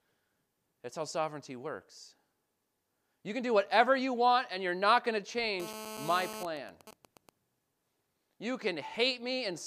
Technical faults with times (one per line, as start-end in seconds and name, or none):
5.60-6.43 GSM phone buzz
6.45-7.29 GSM signalling bursts